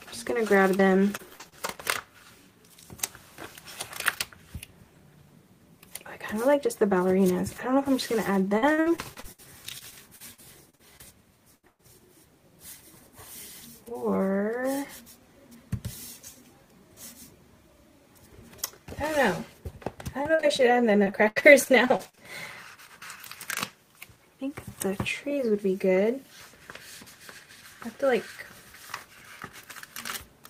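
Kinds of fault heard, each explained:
Short concealed packet loss: Around 0.77 to 0.81 s, about 20 ms of audio went missing and was patched by extending the preceding sound, causing a brief smear. On a spectrogram, harmonics or noise stretch flat for a moment.
Repeated packet loss (robotic sound): Four stretches (1.17 to 1.54 s, 8.58 to 9.40 s, 9.78 to 11.01 s, 20.23 to 22.19 s) hold 4 to 14 gaps each, up to 81 ms, concealed in turn. This causes choppy sound with pieces missing. A spectrogram shows repeated frozen, smeared blocks; the waveform looks uneven and patchy.
Burst of packet loss: At 11.55 to 11.65 s and 11.67 to 11.81 s, roughly 80 ms and then 120 ms vanish. The last sound is held and fades, followed by about 10 ms of silence in the second gap. The spectrogram shows a flat, dimming band; the waveform shows a decaying envelope before resuming.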